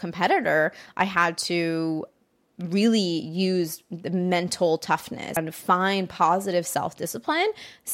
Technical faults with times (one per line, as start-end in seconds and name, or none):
5.37 damaged data in a compressed stream